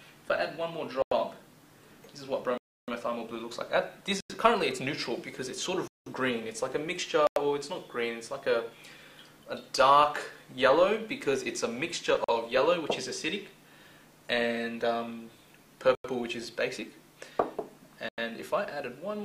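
Samples were repeatedly replaced by zeros, leaving a block of digital silence at 1.02, 2.58, 4.21, 5.88, 7.27, 12.24, 15.95 and 18.09 s. Most gaps last about 93 ms, which fits a 4096-sample output buffer going unfilled. The longer gaps are 0.30 s at 2.58 s and 0.19 s at 5.88 s, and the one at 12.24 s is a shorter 43 ms. Each hole cuts in and out abruptly.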